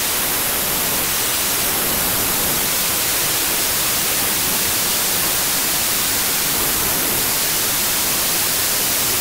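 From start to finish the audio suffers a wrong sample width. Data stored as 32-bit integers is being read as packed 24-bit integers. Each sample is assembled from three bytes that straddle the real four-byte boundaries. Most values become garbage, and only some carry the true top bits. The result is loud, harsh noise with the original sound buried underneath. Playback runs at 0.75 times normal speed, so the buried sound is slowed and lowered in pitch.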